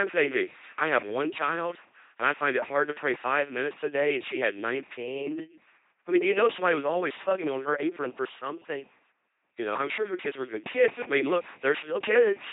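An LPC-10 vocoder runs throughout, rebuilding the speech from a pulse train or noise through a ten-pole filter at about 2.4 kbit/s: buzzy, robotic, nothing above 3.8 kHz.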